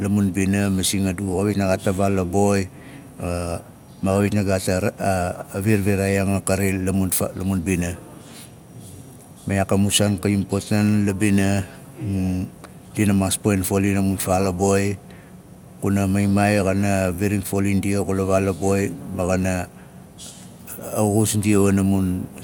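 A speech recording with no audible technical faults anywhere in the signal.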